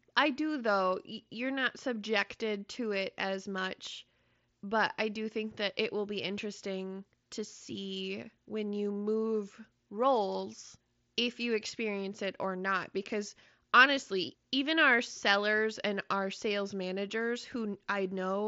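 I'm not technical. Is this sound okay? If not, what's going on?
Yes, the speech comes through a Bluetooth headset's mSBC wideband link as expected, carrying frequencies up to about 8 kHz, with no faults to report.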